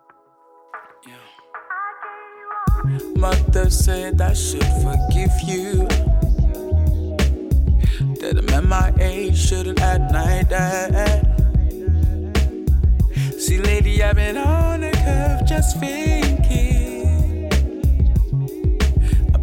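No technical faults can be heard anywhere in the signal, which stays continuous and intact from its first moment to its last.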